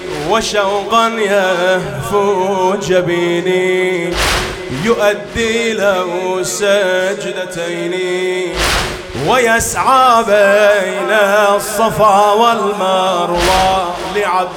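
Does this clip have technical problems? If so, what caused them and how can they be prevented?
No, nothing in this clip points to a technical problem, so there's nothing here that needs fixing or preventing.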